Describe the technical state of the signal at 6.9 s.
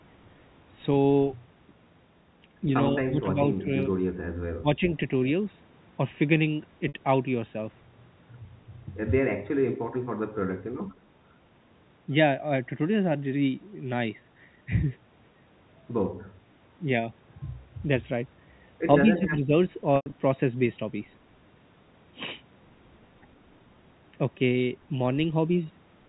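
Packet loss with pitch repetition occurs from 6.88 to 6.94 s. About 60 ms of audio goes missing, which fits three lost packets. The receiver bridges the gap by repeating the last pitch period, so the sound briefly holds as a slightly buzzy, sustained tone before the speech resumes.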